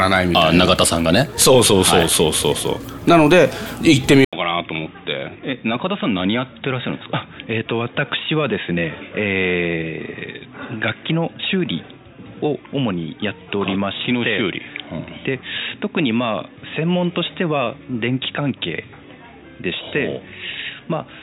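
At 4.25 s the recording likely switched its input to a poorer device. After an 80 ms silence, the sound turns dull and boxy with nothing above 3.8 kHz, drops about 10 dB in level, and carries a new, faint noise floor through to the end.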